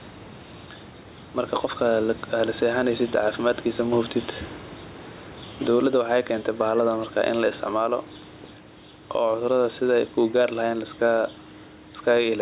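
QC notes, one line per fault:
throughout, gain pumping: input gain is likely set too high, so a fast limiter clamps every loud passage and releases in pauses, swinging level by about 10 dB and squashing the speech's dynamics.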